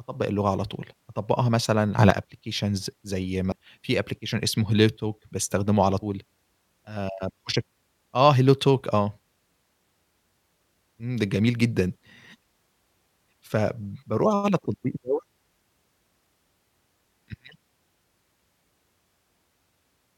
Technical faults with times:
1.98-2.10 sudden gain jump
3.51 damaged data in a compressed stream
5.99-6.03 damaged data in a compressed stream
12.35 damaged data in a compressed stream

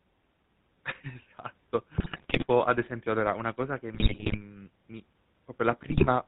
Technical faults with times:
0.00-6.27 GSM full-rate codec
1.94-2.46 GSM bit errors
3.94-4.42 GSM bit errors
5.88-6.06 GSM bit errors

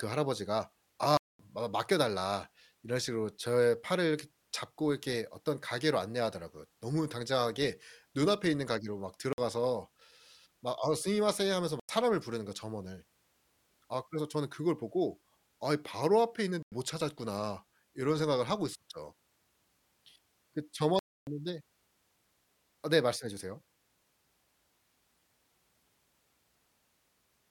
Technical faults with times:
1.17-1.39 block of digital silence
9.33-9.38 block of digital silence
11.80-11.89 block of digital silence
16.63-16.72 block of digital silence
20.99-21.27 block of digital silence

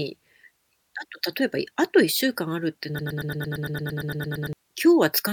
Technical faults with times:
2.99-4.53 broken-record loop

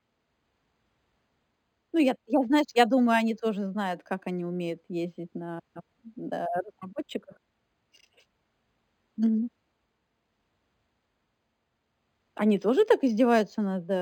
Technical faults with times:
0.00-14.02 imaging from linear upsampling

